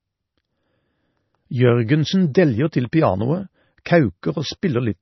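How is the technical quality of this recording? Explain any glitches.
The technical quality is poor. The speech is dull and watery throughout, and two attacks are smeared by brief hiss.

MP3 compression, likely at a low bitrate around 24 kbps, removes everything above 5.9 kHz and adds swirly artefacts. A spectrogram shows a flat ceiling with patchy, flickering bands below it.

Pre-echo occurs at 2.92 s, just after "deljer til", and again at 3.85 s. Quantisation noise from each transform block spreads 10 to 12 ms ahead of the attack. A waveform shows hiss before each onset.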